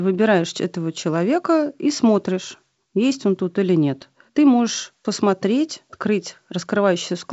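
Nothing here counts as a fault: the speech comes over G.722 wideband telephone coding at 56 kbit/s, with the expected faint coding hiss and nothing above about 7.7 kHz, just as that link normally sounds.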